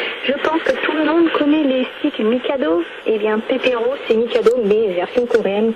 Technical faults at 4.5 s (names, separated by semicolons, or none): none